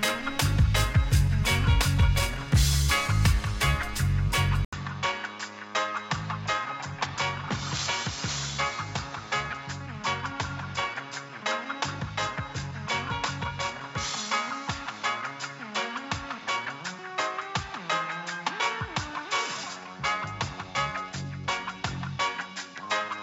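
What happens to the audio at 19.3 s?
At 19.3 s the sound is dull and narrowed, with nothing above 7.5 kHz, somewhat quieter, and carrying a faint new background noise. This persists from 4.65 s, after an 80 ms silence, to the end. The likely cause is the input switching to a poorer device.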